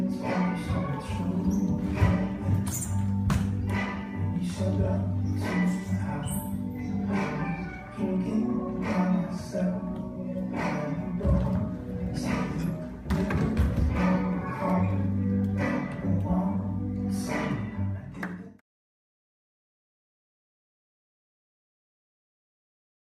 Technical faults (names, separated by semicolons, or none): none